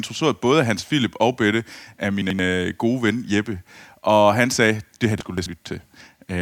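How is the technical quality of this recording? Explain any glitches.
Two spots in the speech have chunks out of order. From 2.22 to 2.39 s, just before "øh gode ven", an 85.3 ms chunk arrived one chunk late and plays after the piece that should follow it. From 5.21 to 5.46 s, right after "han sagde det her", a chunk plays two chunks late. Nothing is lost, but the reordering leaves three hard joins each time, so both moments come across as a brief jumbled, garbled stretch.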